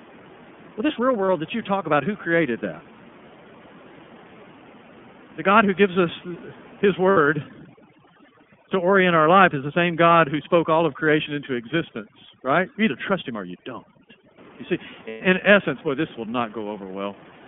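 Throughout, the speech carries the sound of the iLBC codec: the band stops near 3.4 kHz and little comes through below about 150 Hz, and the voice has a plainly audible rough, slightly synthetic grain. That grain, rather than any dullness or smearing, is what separates it from a low-bitrate codec like AMR or a simple band-limit. The 30 ms frame rhythm heard at the dropouts fits iLBC's 30 ms mode at roughly 13 kbps.

Lost iLBC frames break in at 1.26 to 1.29 s (30 ms), 7.11 to 7.18 s (60 ms) and 15.08 to 15.21 s (120 ms). Each time, the decoder fills the hole by repeating the last pitch cycle with noise mixed in, so a short, buzzy held vowel replaces the missing sound, fading in the longest gap. Unlike a plain dropout or click, there is no silence. Recovery is nearly instant because each frame decodes on its own, leaving no lingering smear.

Overdone noise removal runs from 7.36 to 14.38 s. 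The room noise, about 23 dB below the speech, drops and breaks up, with twinkling specks left behind. Quiet parts of the voice near the noise estimate are stripped out with it. That twinkling, band-by-band gating distinguishes it from the codec's steady roughness, which stays the same before and after this stretch.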